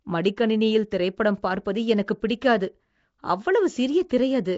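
Nellymoser compression runs through the whole speech clip: the voice carries a rough, hissy halo and a smeared, underwater blur, with nothing above 7.7 kHz. The cause is likely Nellymoser Asao coding, whose fixed bit budget leaves weak bands noise-filled, fitting roughly 32 kbps.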